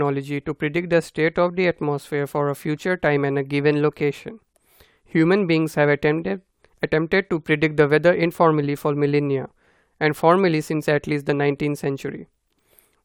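No technical faults can be heard anywhere in this speech recording. Nothing in it calls for a timestamp or a correction.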